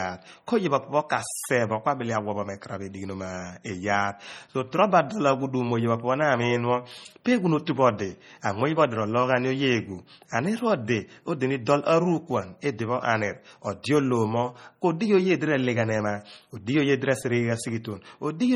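It's a speech clip with a watery, swirly quality all the way through, and the likely cause is heavy MP3 compression. The damage fits a starved bitrate of around 32 kbps, with weak frequency components flickering in and out between frames, even though content runs up to about 20.1 kHz. There's also pre-echo at 7.25 s and again at 13.83 s: a brief hiss smeared ahead of a sharp attack, spreading about 12 ms and 15 ms respectively. The codec spread its coding noise across the whole block, so the noise leaked into the quiet moment just before each attack.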